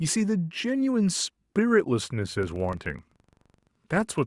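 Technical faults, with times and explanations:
2.43 s to the end (4.26 s): filter restarted on every block. From here on the speech picks up a fine buzz of regular ticks, about 23.4 per second, and it gets louder and softer with the speech itself. A filter in the chain seems to drop its memory at each block boundary and start again from silence, so every block opens with a tiny transient. That spacing fits a 1024-sample block.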